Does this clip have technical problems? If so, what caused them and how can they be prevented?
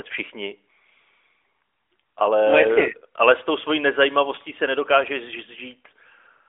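No, this clip has no technical problems.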